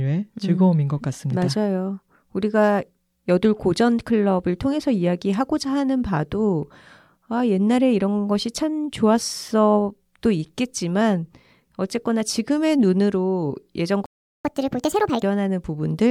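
At 14.06 s the speech cuts out for about 390 ms, until 14.45 s: a playback stall, likely from the player running short of data or its thread being blocked. The waveform drops to a flat line and the spectrogram shows a clean vertical gap before the sound resumes.

From 14.45 s to 15.23 s comes catch-up at higher speed, as the player resamples its backlog at 1.5 times normal rate. The speech sounds hurried and raised by around seven semitones. On the spectrogram the harmonics and formants shift upward, and the waveform's syllable envelopes appear compressed in time until normal playback returns.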